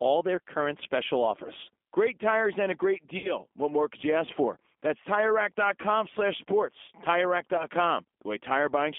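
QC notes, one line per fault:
Throughout: G.729 codec. The speech is squeezed into a narrow telephone band, roughly 250 Hz to 3.5 kHz, with nothing above 4 kHz surviving, so it sounds thin and boxed in. At 8 kbit/s, which fits G.729A, each 10 ms frame is rebuilt from a vocal tract filter, a pitch predictor and a handful of pulses. That leaves the voice intelligible, but there is a plain roughness and a synthetic edge on every phrase.
3.18 to 3.35 s, and 7.57 to 7.66 s: VoIP packet loss concealed by the speech codec. The first gap comes right after "tires and a great". About 60 ms of audio went missing there, which points to three lost packets, and the decoder filled it by extending its last pitch and filter state with falling gain. The sound smears and fades. Because each frame builds on the previous one, the voice stays weak and distorted past 3.3 s. The second drop is shorter, about 20 ms, or one packet's worth. 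It gives a brief smear and a short weak recovery to 7.66 s.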